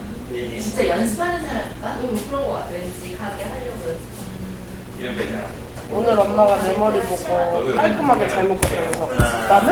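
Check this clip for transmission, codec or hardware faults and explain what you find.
There's one fault, and it runs the whole clip: Opus compression, likely at a low rate in hybrid mode (roughly 16 kbps), leaving the sounds grainy, rough and hoarse, with noise-filled bands.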